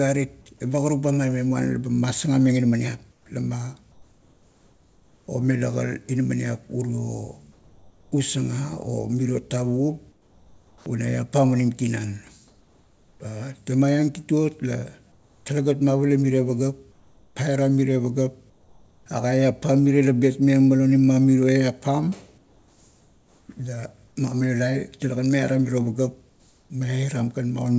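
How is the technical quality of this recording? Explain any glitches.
The pauses keep giving way to comfort noise in place of the background. Audio tops out around 8 kHz, as you'd expect from a wideband call codec.

This happens at 3.12–5.28, 7.52–8.12, 10.12–10.86, 12.48–13.20, 15.12–15.46 (just before "talegat mavala miro"), 16.92–19.06, 22.38–24.16 and 26.30–26.70 s. The likely cause is discontinuous transmission: the sender goes quiet when no speech is detected, and the receiver fills the gap with synthetic noise. So the real room tone turns into a flat, featureless hiss, about 4 to 6 dB quieter, and the longer stretches mix this with bits of normal background.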